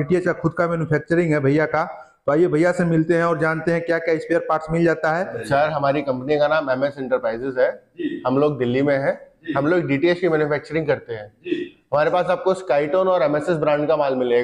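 Nothing stood out as a technical fault on listening to the recording.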